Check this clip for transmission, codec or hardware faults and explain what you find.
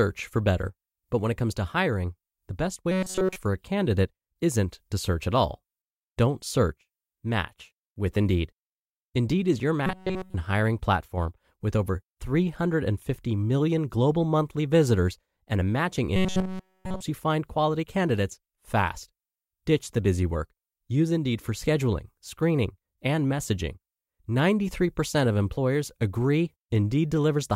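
Three bursts of robotic sound from repeated short buffers turn up: 2.91 to 3.36 s after "to hiring the best", 9.86 to 10.35 s after "is your", and 16.16 to 17.02 s after "visitors and a matching". Each time the speech collapses into a stiff metallic buzz at 188 Hz, with essentially all of it repeated material. The likely cause is audio arriving late, so playback loops a roughly 5 ms slice while the real signal is skipped.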